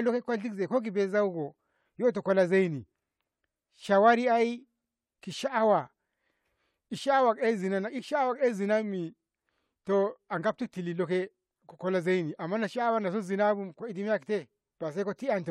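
A speech recording with nothing technically wrong with it at any point, so there's no fault to point to here.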